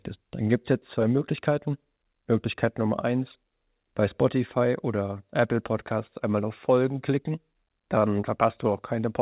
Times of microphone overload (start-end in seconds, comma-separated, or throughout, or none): none